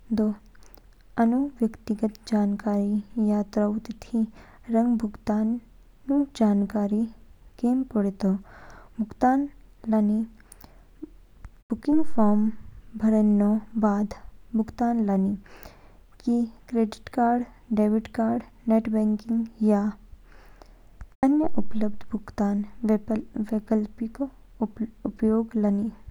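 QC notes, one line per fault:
Nothing to flag here; the speech comes through without any faults worth noting.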